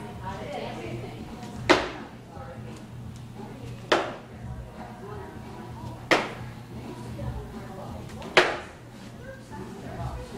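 No technical faults can be heard anywhere in the audio. There is nothing to place in time and nothing to trace back to a cause.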